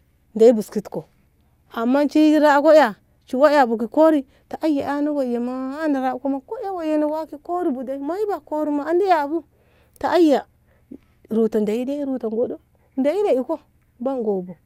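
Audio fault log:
No faults detected in this recording.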